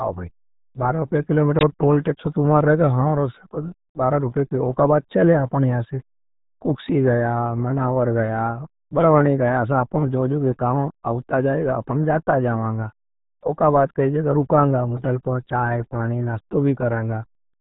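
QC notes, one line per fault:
Throughout, RealAudio 14.4 codec: the speech is heavily mangled, with nothing above about 3.9 kHz, so it sounds muffled and gargly. That's the old dial-up speech codec squeezing everything into a tiny data budget, which fits an 8 kbit/s stream.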